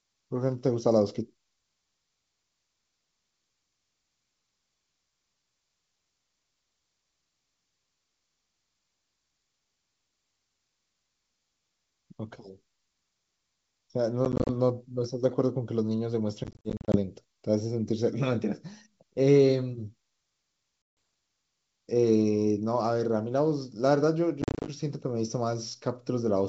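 Speech over G.722 wideband coding, with packet loss on an ADPCM call at 14.25–14.50, 16.44–16.97, 20.82–20.97 and 24.42–24.69 s. Three of the bursts cut several hard-edged silent gaps of up to 40 ms, and the one at 20.82 s is a single 150 ms gap; these appear as abrupt vertical blanks in the spectrogram and flat stretches in the waveform. The speech after each gap returns slightly distorted because the decoder's predictor and step size have drifted from the sender's.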